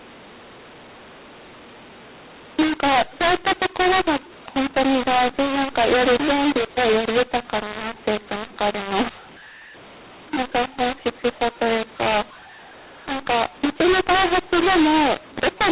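A speech recording carried over G.711 telephone coding, its spectrogram cut off at 4 kHz, which fits 8 kHz telephony. Throughout, it suffers mu-law and A-law mixed up: A-law samples decoded as mu-law scramble levels, so speech is harshly distorted, the waveform's envelope looks jagged, and pauses show a raised noise floor instead of silence.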